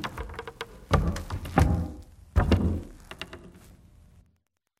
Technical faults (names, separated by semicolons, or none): Wi-Fi interference